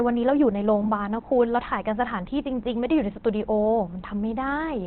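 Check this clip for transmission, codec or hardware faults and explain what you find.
There's one problem, and it runs through the whole clip: heavy Opus compression is the likely cause. The speech sounds muffled and hoarse, with nothing above about 4.5 kHz. That narrowband ceiling and the rough texture point to the encoder running in its SILK speech mode at a very low rate, roughly what you'd get around 12 kbps. With so few bits, it trims the bandwidth hard and models the voice coarsely rather than preserving detail.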